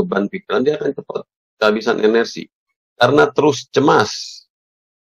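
Nothing in this audio stands out as a technical problem; it just runs along without a hitch.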